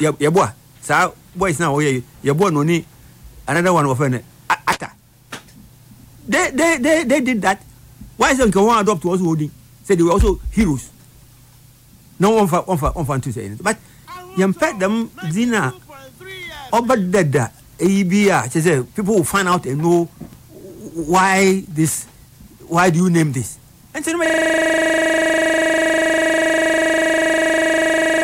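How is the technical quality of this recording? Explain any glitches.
One real problem, near the end. From 24.26 s to the end, there's a system hang loop: the system froze while the audio hardware kept replaying the same 40 ms buffer. That repeats 25 times a second, so the sound collapses into a steady 25 Hz buzz until it stops.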